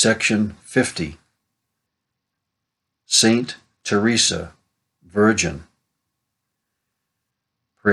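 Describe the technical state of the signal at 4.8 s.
At 4.8 s the signal is intact, with no dropout, distortion or other fault audible at that point.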